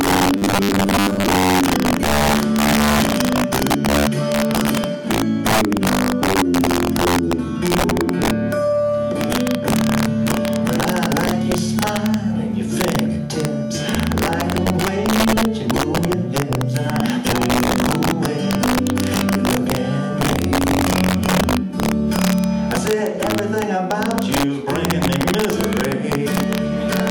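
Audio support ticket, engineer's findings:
Integer overflow, whole clip. Sharp, violent cracks on loud peaks, harsher than clipping. Gain stage driving about 4 dB past full scale, with around 2% of samples over the limit, wrapping to the opposite sign instead of saturating. Waveform shows peaks flipping rail to rail in single-sample jumps. Spectrogram shows thin broadband vertical streaks at each loud moment. Suspect a missing clamp in fixed-point mixing or gain code.

Robotic sound from repeated short buffers, 0.38 to 1.26 s. Rigid metallic buzz at 100 Hz that still loosely tracks the underlying sound. Likely buffer underrun, with playback refilling the gap by looping the last 10 ms segment. Roughly half the material is repeats, standing in for skipped audio. Spectrogram shows a hard 100 Hz harmonic comb. Waveform shows identical 10 ms blocks tiling the span.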